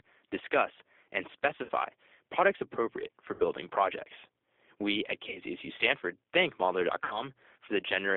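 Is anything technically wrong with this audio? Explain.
Yes. The whole clip has passed through a G.729 codec at 8 kbit/s. This is speech rebuilt from a vocal tract filter, a pitch predictor and a few pulses per frame, so it sounds rough and slightly synthetic. The band is held to roughly 300 Hz to 3.6 kHz. A spectrogram shows an empty region above 3.6 kHz and thin energy below 300 Hz, with smeared, blocky harmonics where the codec's sparse pulse excitation stands in for the real waveform.

There are also four gaps of VoIP packet loss concealed by the speech codec, at 1.63–1.71 s, 3.34–3.44 s, 5.29–5.39 s and 7.04–7.23 s. Each lost stretch is about 60 ms, which fits three 20 ms packets. The decoder fills the gap by repeating its last pitch and filter with falling gain, so you hear the sound stretched into a brief buzzy tone or coloured noise that fades. Because the decoder's state has to recover, the sound stays weak after packets return. 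On a spectrogram these appear as frozen, flat harmonic bands. On the waveform they show as decaying, overly regular periods.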